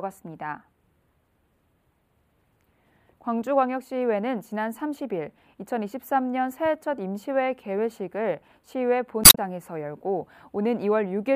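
Damaged data in the compressed stream appears from 9.21 to 9.38 s: for about 165 ms the decoder meets corrupted frames it cannot read correctly, loses sync while hunting for the next valid frame header, and the sound briefly breaks up before resuming.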